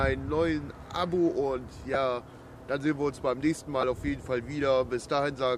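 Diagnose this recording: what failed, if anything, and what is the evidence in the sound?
Two brief noisy smears interrupt the sound, at 1.94 s and from 3.81 to 3.83 s. The first lasts 7.5 ms and the second 15 ms, which fits one and then two lost 7.5 ms frames. These are lost LE Audio frames on the Bluetooth link, so the failure sits at the codec stage. The LC3 decoder covered each gap by reusing the last received spectrum with randomised signs, which turns the missing stretch into noise-like sound.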